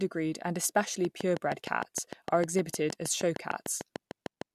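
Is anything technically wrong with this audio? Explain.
Yes. A train of clicks runs from 1.05 to 4.43 s: some twenty near-identical pulses at a steady 6.5 per second, peaking roughly 10 dB above the speech. Their likely cause is interference from nearby equipment or a faulty connection or power supply. They sound like regular ticking through both speech and pauses.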